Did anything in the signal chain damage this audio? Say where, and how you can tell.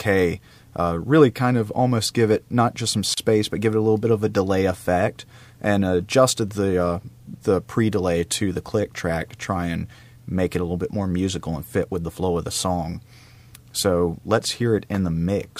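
Yes, at the codec stage: there's a gap at a join of encoded pieces around 3.14 to 3.17 s, a drop of about 35 ms before the sound picks up where it left off. Separately encoded chunks were spliced untrimmed, so encoder delay and last-frame padding sit in the middle.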